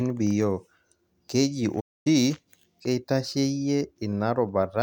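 A speech clip with a playback stall. At 1.80 s the sound cuts to silence mid-flow and stays silent for about 250 ms, resuming at 2.07 s. The player likely ran short of data or had its thread blocked, so output halted until it recovered.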